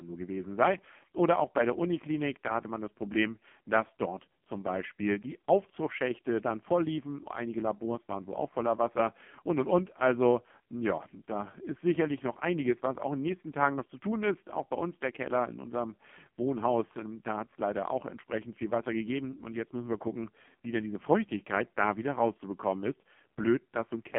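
AMR narrowband mobile codec damage runs throughout the speech: the band spans 150 Hz to 3.4 kHz, with nothing above 3.7 kHz. Heavy, buzzy, synthetic coloration fits a 5.15 kbps mode rebuilding each frame from a vocal-tract model driven by sparse pulses.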